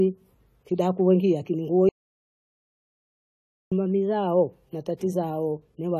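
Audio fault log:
throughout, AAC compression: likely low-bitrate AAC-LC coding around 32 kbps, leaving too few bits for what the hearing model needs, so speech sounds dull and smeared with plainly audible warble, nothing above 14 kHz.
1.89–3.72 s, audio dropout to silence: input likely lost for about 1.83 s after "kidaku wakia kini nguo", writing silence with no room tone until "mamizao na".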